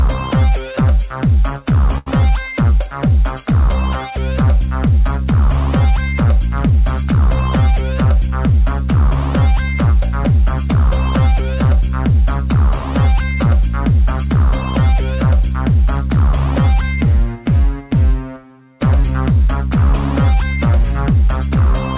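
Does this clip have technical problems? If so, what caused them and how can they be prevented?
Yes. A burst of packet loss occurs from 1.98 to 2.08 s. The receiver covered an 80 ms gap by extending the last sound and letting it fade, then resumed further on. About 80 ms of audio is missing. Larger jitter buffers and forward error correction help prevent this.

The band stops at 4 kHz, which fits a G.711 A-law call path.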